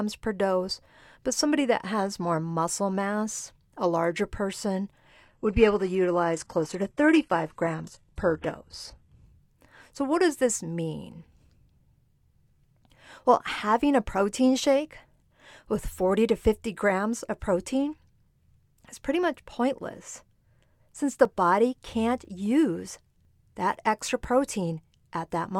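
At 5.25 s, just after "mass a larger person", the stream drops to a lower bitrate until 9.25 s. Nothing above 14.8 kHz survives, and the treble drops, which fits a switch from AAC-LC at 96 kbit/s to a low-rate HE-AAC version. The change is abrupt, with no gap.

From 20.25 s to 24.24 s, after "is pretty much pointless", periodic USB or driver dropouts produce a tick roughly every 1.00 s, about five in all. Each one skips a couple of milliseconds of audio outright, so the ticks are heard only while speech is present.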